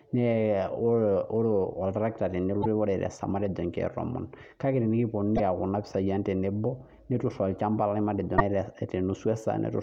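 At 2.60 to 2.66 s, 5.34 to 5.40 s and 8.35 to 8.41 s, the speech is interrupted by short glitches of damaged data in the compressed stream. Each lasts about 55 ms: corrupted bytes made the decoder misread those frames and lose sync until it locked onto a later frame header. On a spectrogram each appears as a narrow vertical disturbance breaking the harmonic bands; the waveform shows a brief disruption.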